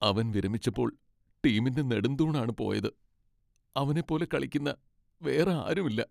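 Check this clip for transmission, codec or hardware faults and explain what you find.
No transmission, codec or hardware faults.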